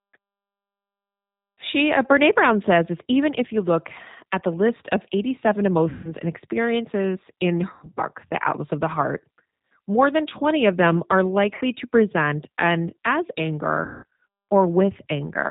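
Throughout, the G.729 codec at 8 kbit/s removes everything above 4 kHz. The speech sounds rough and synthetic.

VoIP packet loss concealed by the speech codec occurs at 5.89 to 6.12 s, 7.73 to 8.02 s, 11.55 to 11.61 s and 13.85 to 14.04 s. The decoder repeats its last pitch and filter, which produces a buzzy tone or coloured noise that fades. The voice stays weak or distorted briefly afterwards.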